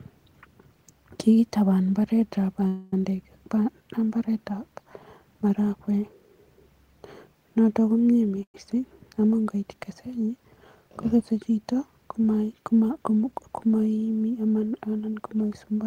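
At 2.67 to 2.93 s and again at 8.43 to 8.55 s there's a call audio freeze. The last bit of speech gets stretched into a fading buzz, about 250 ms the first time. The second is shorter and dies into roughly 90 ms of silence. Likely cause: packets held up in transit and the jitter buffer running dry. Speech picks up where it left off, so nothing's lost, just delayed.

From 12.66 to 13.49 s there's a jitter buffer speed-up. The buffer was holding too much audio, so the receiver snipped out tiny pitch-period slices to catch up, about a tenth of a second in all. Speech runs at 112% speed, same pitch, and sounds hurried.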